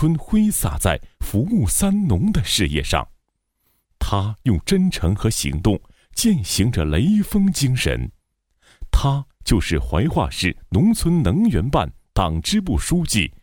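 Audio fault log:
10.75 s, repeated buffer: one 1.45 ms slice, which fits a 64-sample buffer, plays twice with a hard join, heard as a single tiny click. Unlike a dropout, no audio goes missing; the sound is doubled, not gapped, so timing barely shifts.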